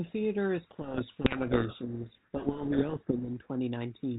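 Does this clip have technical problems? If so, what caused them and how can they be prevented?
Yes. From 0.71 to 3.29 s the speech is buried in harsh, grinding distortion. This is a codec payload misread: the two ends of the G.726 link disagree on the bit order of each code word, so the decoder rebuilds wrong differences. Negotiating the packing format explicitly at call setup prevents it.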